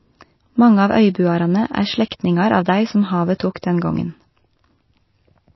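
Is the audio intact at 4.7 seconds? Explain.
No. At 4.7 seconds the speech sounds dull and watery, with a swirling, unstable texture, and nothing is heard above 5.8 kHz. The same damage runs through the whole clip. The likely cause is MP3 compression at a low bitrate, around 24 kbps. Short of bits, the encoder cuts the treble at a fixed frequency and drops weak frequency lines, which flicker on and off between frames and produce the swirl.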